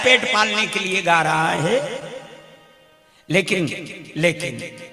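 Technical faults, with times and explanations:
2.68 to 3.61 s, jitter buffer slow-down: the receiver repeats short pitch periods to rebuild its reserve, adding 41 ms so the passage plays at 96% speed, slightly drawn out. Unlike a slowed tape or wrong sample rate, the pitch stays unchanged.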